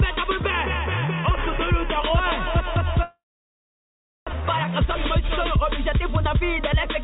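From 3.03 to 4.35 s there is what sounds like a long network dropout: the likely cause is a stretch during which no packets reached the receiver. Lacking new data, the receiver briefly extends the last sound as a decaying buzz, and after a few tenths of a second there is only silence for about 1.08 s. When the audio resumes, about 1 s of material is simply gone, and playback has fallen behind by roughly a fifth of a second.

From 4.42 s to the end at 7.04 s, the jitter buffer speed-up works off that backlog. The buffer holds more audio than its target, so the receiver repeatedly cuts out short slices a pitch period or so long. The sound therefore plays at about 107% of normal speed with unchanged pitch, giving a slightly hurried, compressed feel. Throughout, the band stops at 4 kHz, which fits a G.711 A-law call codec at 64 kbps.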